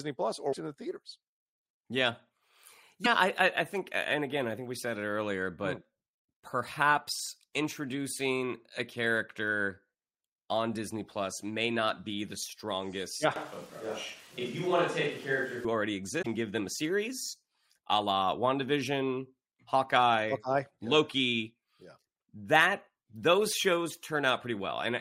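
At 0.52 to 0.55 s, just before "it in the theaters", and at 3.04 to 3.07 s, just before "I I think and", the speech skips forward with a brief glitch. This is likely a broken MP3 bit reservoir: a cut removed frames whose borrowed data the following frames still needed, and the short span fits one or two 24 ms frames. At 13.36 s the speech turns roomy and hollow with thinner bass, consistent with a switch to a distant microphone. The level stays roughly the same, but room noise rises to around 25 dB below the speech. The close microphone returns abruptly at 15.65 s. The same bit reservoir skip recurs at 16.21 to 16.27 s, just before "give them a series".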